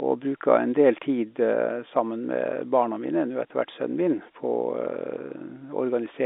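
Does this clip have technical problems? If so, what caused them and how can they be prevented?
Yes. Bit errors on a digital phone line struck the G.711 A-law link in one short burst from 3.82 to 3.84 s, just after "etter hvert". The error rate was very low, about 0.07 percent, roughly seven bits in ten thousand. Because A-law stores each sample as a single 8-bit logarithmic code, a flipped sign or high-order bit throws that sample far from its true value, producing a brief, sharp tick over the speech. The surrounding 250 Hz to 3.6 kHz telephone band is unaffected. Prevent it with a cleaner, error-checked transmission link, such as better line conditioning or a protected digital trunk, so that flipped bits never reach the decoder.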